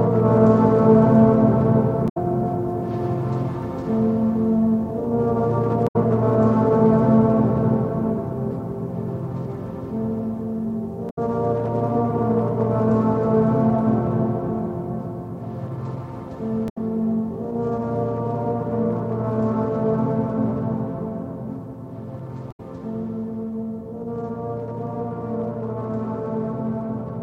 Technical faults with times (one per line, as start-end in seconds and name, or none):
2.05-2.17 damaged data in a compressed stream
5.84-5.96 damaged data in a compressed stream
11.06-11.18 damaged data in a compressed stream
16.65-16.77 damaged data in a compressed stream
22.48-22.60 damaged data in a compressed stream